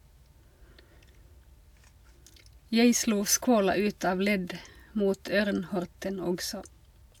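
No technical faults can be heard in this speech.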